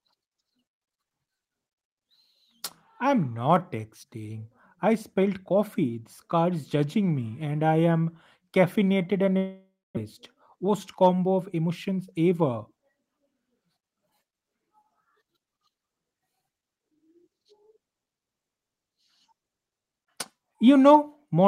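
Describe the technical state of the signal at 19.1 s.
At 19.1 s the speech signal is intact, with no audible technical fault at that moment.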